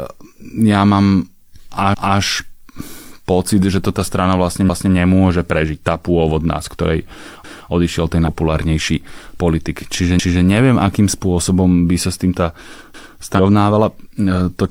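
A short stutter at 1.94 to 2.19 s, where a 250 ms stretch of speech plays twice, comes from overlapping chunks. The audio was handled in 2.5 s chunks, and each began before the previous one finished, so the join repeats audio. The same stutter returns at 7.44, 10.19 and 12.94 s.

A brief glitch at 8.24 to 8.28 s marks damaged data in a compressed stream. Corrupted frames threw the decoder out of sync until it found the next frame header. A similar blip follows at 13.35 to 13.39 s.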